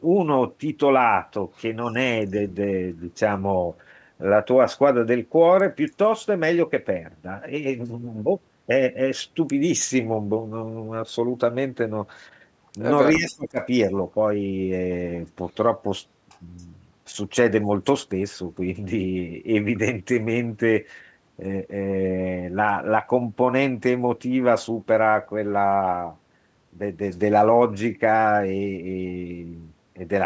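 Speech over a call path, band-limited to 8 kHz by the normal microphone processing. From 13.15 to 13.6 s the voice dips sharply, by roughly 25 dB at its deepest. This is likely speech suppressed in double talk: the echo canceller could not separate the talker from the overlapping far-end echo and turned the talker down with it.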